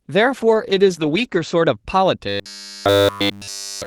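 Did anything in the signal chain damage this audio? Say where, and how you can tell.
Yes. At the codec, a call bitrate drop from 48 to 12 kbps (0.31 to 1.83 s) coarsened Opus and cut the band from 12 kHz to 8 kHz, leaving the speech rough and muffled.

In the buffer stage, a starved buffer likely looped 10 ms chunks, causing robotic sound from repeated short buffers from 2.29 s to the end: a rigid 100 Hz buzz.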